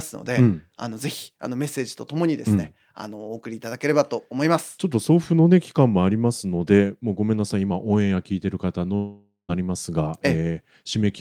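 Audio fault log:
8.95 to 9.51 s, long network dropout: the speech breaks off into a fading buzzy continuation of the last sound, which dies away to a short patch of silence before the voice returns with about half a second missing, likely because incoming audio stopped arriving and the receiver concealed the gap.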